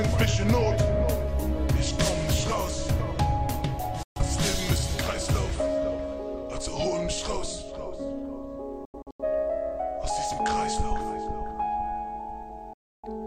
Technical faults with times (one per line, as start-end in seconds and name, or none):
4.03-4.21 digital broadcast dropout
8.85-9.24 digital broadcast dropout
12.73-13.08 digital broadcast dropout